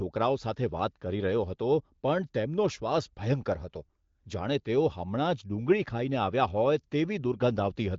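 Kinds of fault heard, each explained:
No faults found; the speech is band-limited to about 7.5 kHz, consistent with a wideband telephony path at around 18 kbit/s.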